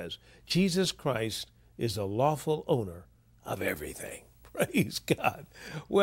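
Speech clip with pre-emphasis left on from 3.68 to 5.68 s, just after "the lawful owner of": the 50/15 µs treble boost was never de-emphasised, leaving about 8 dB extra at 10 kHz, so the spectrogram shows a brightened upper band there.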